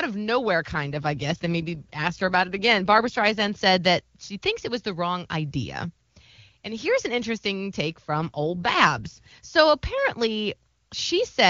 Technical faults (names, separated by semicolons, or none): AMR rate drop